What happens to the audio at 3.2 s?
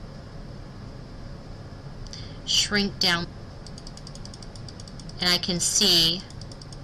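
At about 3.23 to 3.25 s the sound jumps abruptly forward with a brief blip, as though a stretch of material has vanished. This is likely a stream segment skipped: one segment of the segmented stream failed to load, and the player carried on with the next.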